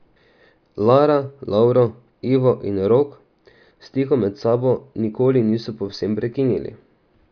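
No technical faults can be heard in the speech at any point, so there is nothing to describe in time order.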